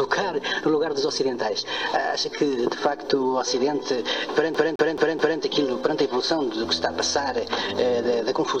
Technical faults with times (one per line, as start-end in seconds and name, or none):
4.54-5.40 CD stuck on one turn